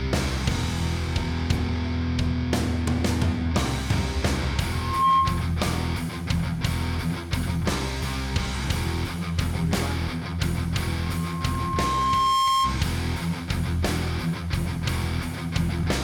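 A microphone is picking up the loudspeaker it drives, and at 1.1 kHz the loop gain rises past one, producing loudspeaker feedback squeal from 4.73 to 5.54 s and again from 11.00 to 12.81 s. Each time a single 1.1 kHz tone swells out of the sound and settles a few dB above it. The first builds in about a third of a second; the second creeps up over roughly a second and a half before it stops.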